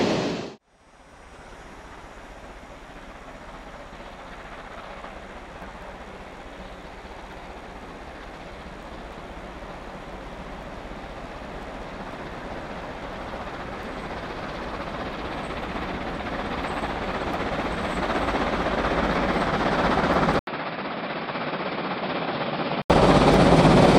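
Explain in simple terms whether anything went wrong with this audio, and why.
Around 20.39 s the sound goes dull and boxy, nothing above roughly 5.3 kHz, clearly quieter, with a brief 80 ms gap and some new faint background noise, until 22.9 s. That's most likely an input switched to a poorer device mid-recording.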